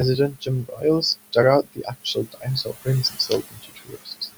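It's a short speech recording with room noise sitting about 14 dB under the voice, and the noise suppressor is working hard on it throughout. It pulls that background down by about 18 dB, so the noise ducks between phrases and swells back under the speech. It also mistakes parts of the speech for noise, with speech cut by the noise suppressor at 0.3–0.84 s, 1.63–2.47 s, 2.64–2.88 s and 3.1–4.29 s. The drops reach about 15, 21, 18 and 21 dB, so softer bits sound swallowed.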